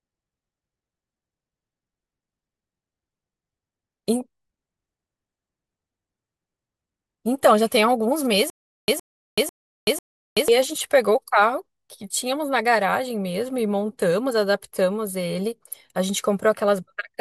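From 8.5 to 10.48 s the player likely stalled, replaying its last fragment at each retry. This gives a stutter with silent gaps: a 115 ms speech burst returns four times, every 496 ms, with 381 ms of digital silence between, and the speech due in that span is lost.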